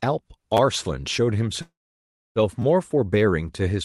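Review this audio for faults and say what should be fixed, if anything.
At 0.57 to 0.59 s and again at 2.62 to 2.64 s there is a repeated buffer. Fresh audio missed its deadline, so the output replayed the same 10 ms block two extra times, three plays in all, with a hard seam at each join. Because the block is so short, it comes across as a tiny click or buzz rather than an audible stutter. Unlike a dropout, none of the speech is lost; a sliver is simply duplicated. Giving the playback thread more headroom or a slightly larger output buffer would prevent it.

From 1.61 to 2.39 s a call audio freeze takes over. The last sound is stretched into a buzz or hiss that fades, and about 0.64 s of that stretch is silence, 0.74 s filled in total. The likely cause is delayed packets draining the jitter buffer. What sets it apart from a repeated buffer or a dropout is the long held-then-silent stretch followed by the speech resuming exactly where it left off, with nothing missing, so everything afterwards arrives 0.74 s late. 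A jitter buffer that adapts to the network's delay spikes, or a steadier network route, would prevent it. The Opus call path's 12 kHz bandwidth limit is present throughout but is not a fault.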